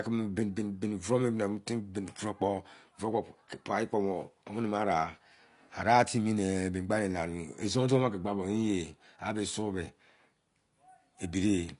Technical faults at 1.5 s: AAC compression

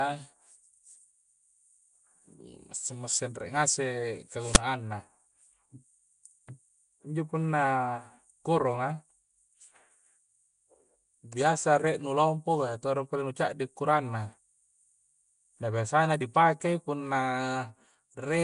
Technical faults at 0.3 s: Nellymoser compression

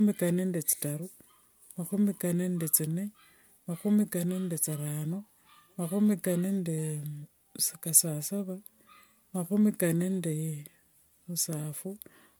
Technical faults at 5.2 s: generation loss

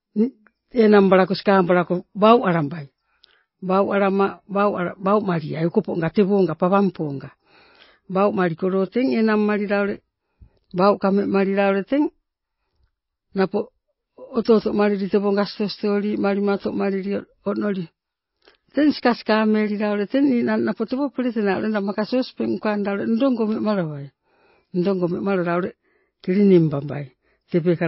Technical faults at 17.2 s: MP3 compression

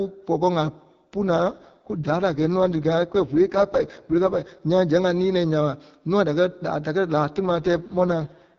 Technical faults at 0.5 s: none

